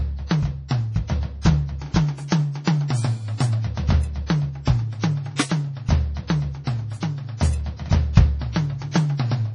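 Throughout the music, the treble stops dead at 10.5 kHz, a flat ceiling on the spectrogram. Weak components blink in and out, giving a watery swirl and speckled, patchy upper bands. This heavy damage is likely MP3 compression at a very low bitrate, around 32 kbps.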